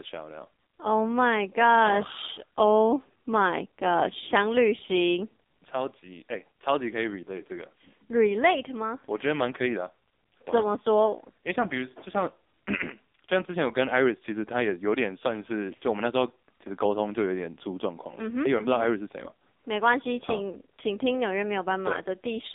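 Throughout the speech, the AMR narrowband mobile codec confines everything to a 250 Hz to 3.7 kHz line band. The heavy coding damage, which fits a low mode near 6 kbps, sounds buzzy and synthetic. A spectrogram shows a hard ceiling at 3.7 kHz, empty above.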